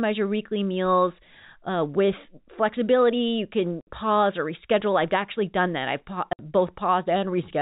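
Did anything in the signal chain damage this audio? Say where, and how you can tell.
Yes, at the network. Packet loss filled with silence leaves 60 ms holes at 3.81 s, before "pause or reschedule I've", and 6.33 s. That fits two 30 ms packets each.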